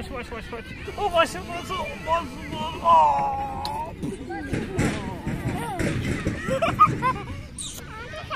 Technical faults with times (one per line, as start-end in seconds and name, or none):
0.86-3.02 GSM phone buzz